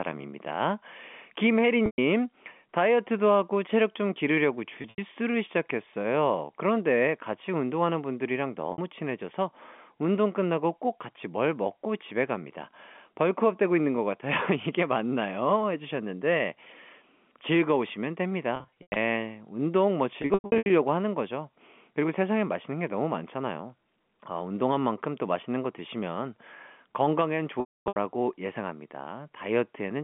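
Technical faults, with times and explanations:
1.86–1.98 s, 4.82–4.98 s, 8.72–8.78 s, 18.56–18.96 s, 20.22–20.70 s, 27.60–27.96 s: packet loss with pitch repetition. Between 60 and 340 ms of sound goes missing each time, which points to 20 ms packets. The receiver fills each gap by replaying the last pitch period, so the shorter losses at 1.86, 4.82 and 8.72 s come out as a brief held, buzzy tone. The losses at 18.56 and 20.22 s are scattered over 400 and 480 ms, and the 260 ms run at 27.60 s fades to silence before the sound cross-fades back. A plain dropout would cut to silence or click, with no sustained buzz bridging the gap.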